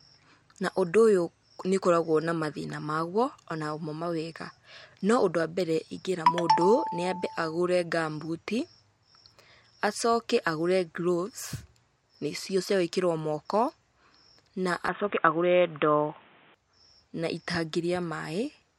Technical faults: input switched to a poorer device

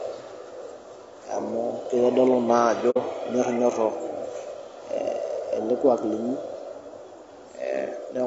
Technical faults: low-delay AAC compression; AAC frame loss with muting

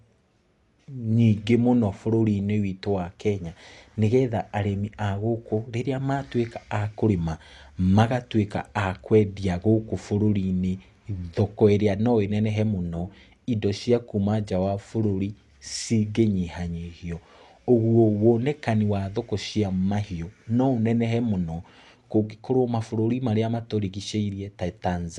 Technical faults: Dolby Digital compression

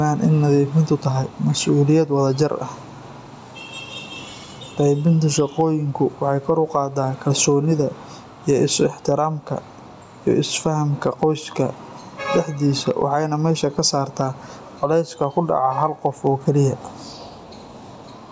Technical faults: gain pumping

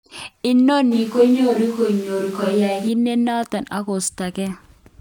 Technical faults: switch to a distant microphone

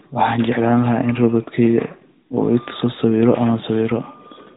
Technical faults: none

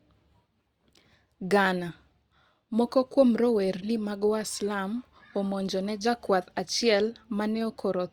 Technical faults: none

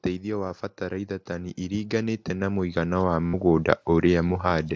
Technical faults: concealed Bluetooth headset packet loss; automatic gain rising

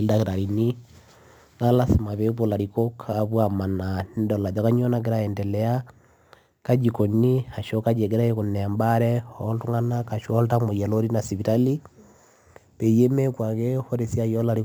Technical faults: crude rate conversion

